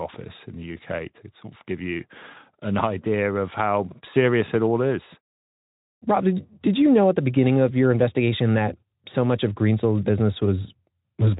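No faults turn up in the speech recording, which carries the light coding texture of a Speex codec path with nothing above about 3.8 kHz, consistent with a setting around 15 kbps.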